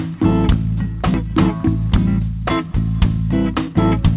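At 1.14 to 1.16 s the sound lurches forward with no gap, about 0.7 s missing: a skip ahead, where queued audio was dropped and the two sides were spliced together. From 3.55 to 4.05 s the sound runs hurried at unchanged pitch, about 115% speed. This is a jitter buffer speed-up, trimming roughly a tenth of a second of pitch periods to cut excess delay. Throughout, nothing above 4 kHz reaches the ear, which fits a 64 kbps G.711 mu-law call codec.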